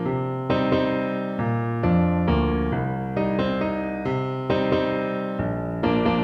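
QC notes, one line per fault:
Throughout: video or display buzz. A screen or video cable is coupling into the audio path, so its interference rides along with the signal for the whole clip. The pickup follows the picture's 60 Hz field rate, which gives a steady low buzz with a layer of gritty hash above it. It sits roughly 35 dB below the wanted sound, quiet but constant.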